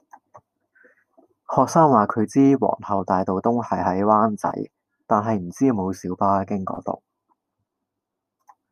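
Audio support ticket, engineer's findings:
AAC frame loss with concealment, speech track: brief smeared, phasey patches at 4.47–4.52 s and 6.75–6.77 s. Decoder's papering over dropped frames with the last good spectrum. Lengths fit roughly two lost frames, then one, about 21 ms each.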